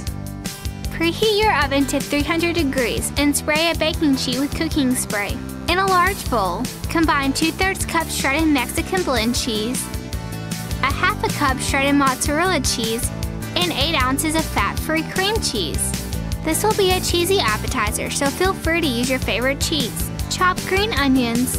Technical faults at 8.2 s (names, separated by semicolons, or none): DECT cordless phone buzz